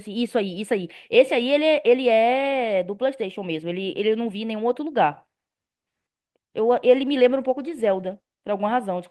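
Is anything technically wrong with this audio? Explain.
Yes. A call bitrate drop runs from 6.7 to 8.57 s: the encoder fell from 32 to 18 kbps, coding the speech more coarsely, so it sounds rough and watery.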